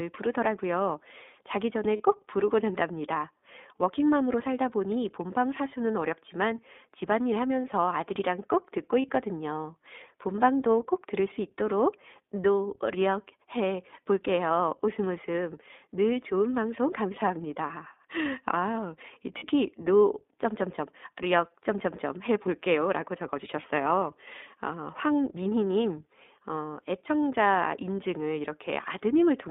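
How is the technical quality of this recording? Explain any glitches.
The technical quality is limited: the whole recording has passed through a narrowband speech codec, and there are five short dropouts where audio was lost and patched over.

iLBC codec, throughout: The speech is confined to a telephone band of roughly 250 Hz to 3.6 kHz, so there is no low body and no air above that. iLBC models each short frame's excitation on its own rather than building on the previous frame. That gives the voice a plainly audible roughness and a slightly synthetic edge, consistent with the codec's 15.2 kbps mode and 20 ms frames.

Lost iLBC frames at 1.96–2.02 s, 9.02–9.05 s, 19.38–19.45 s, 23.62–23.65 s and 25.50–25.53 s: In each case one or two frames went missing, about 20 ms or 40 ms of audio. The decoder filled the gap by repeating the last pitch cycle blended with noise, so each spot sounds like a brief held, buzzy or breathy vowel. 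Because every iLBC frame decodes independently, the speech snaps back to normal immediately afterwards.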